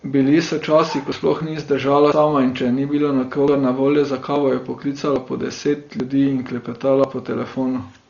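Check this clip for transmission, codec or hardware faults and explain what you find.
Two faults are present in this speech. Throughout, heavy Dolby Digital compression is likely at work: the encoder starved many frequency lines of mantissa bits and cut the band, leaving nothing above 6.9 kHz. The speech sounds dull, with rough, fluttering noise, which points to a bitrate around 40 kbps.

Dropped buffers (overrun), likely from the program failing to collect samples before the hardware overwrote them, occur at 1.12 s (between "so časi" and "sploh ni zdržala"), 3.48, 4.36 (after "na voljo za"), 5.16, 6.0 and 7.04 s (after "po deset ljudi in"). The others each cut out about 40 ms, and the one at 3.48 s cuts about 70 ms, splicing the edges together with a jump in the speech.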